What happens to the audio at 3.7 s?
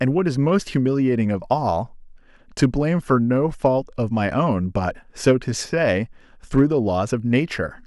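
At 3.66 s the speech hits hard clipping for a few milliseconds. A peak in the waveform is larger than the signal path can carry, overdriven by about 1 dB, so its top is sliced flat. That flat edge adds harmonics high in the spectrum. Because the overload is small and very brief, it comes across as a single tiny crackle or tick on that peak rather than a sustained fuzz.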